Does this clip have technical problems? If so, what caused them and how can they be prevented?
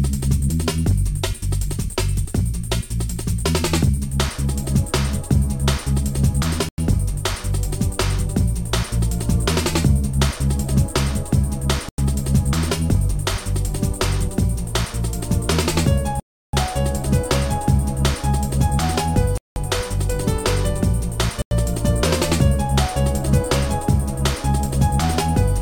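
Yes. Blocks of digital silence cut the sound abruptly at 6.69, 11.89, 16.20, 19.38 and 21.42 s. The holes last about 93, 93, 335, 186 and 93 ms, which for all but the 335 ms hole fits whole 4096-sample buffers going unfilled. The hard edges distinguish them from fades. Larger buffers and a lighter processing load prevent this.

Video or display buzz runs from 12.87 s to the end: a 60 Hz field-rate buzz with hash above it, about 30 dB below the signal. The hash distinguishes it from plain mains hum. Rerouting audio cables away from screens and video leads prevents this.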